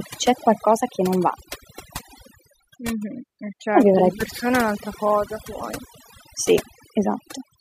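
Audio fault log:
throughout, overdone noise removal: the speech has been put through noise reduction set far too aggressively. Any frequency band whose level sits close to the tool's noise estimate gets pulled right down or switched off. Quiet parts of the voice fall into that range and are removed along with the noise. The background drops and is broken by brief twinkling specks where isolated bands flicker back on.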